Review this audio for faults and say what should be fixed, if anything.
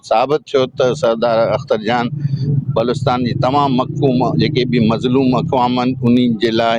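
Gain pumping runs through the whole clip, likely because the input gain is set far too high and a fast limiter or compressor keeps clamping down on each loud sound. The level swings by around 15 dB. Loud and quiet passages end up squeezed close together, so the sound is flattened. To prevent it, lower the input gain so peaks sit well below the limiter's threshold.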